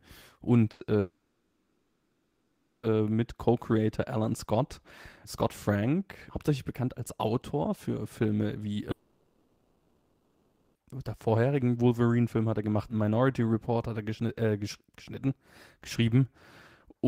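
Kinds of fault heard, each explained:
Burst of packet loss: From 0.71 to 0.82 s, about 80 ms of speech is missing. The last sound is stretched and fades over that short gap before speech jumps ahead. It is brief, with no silence, which sets it apart from a dropout.
Long network dropout: At 0.99 to 2.86 s and 8.91 to 10.78 s, nearly two seconds vanish each time. The first ends in about 0.6 s of silence. The second holds a fading fill right up to "der vorherigen". The likely cause is a stall in the network stream.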